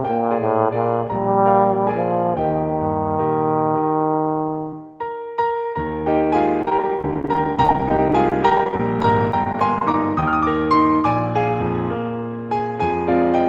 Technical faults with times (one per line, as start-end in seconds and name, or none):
6.62-10.23 repeated packet loss (robotic sound)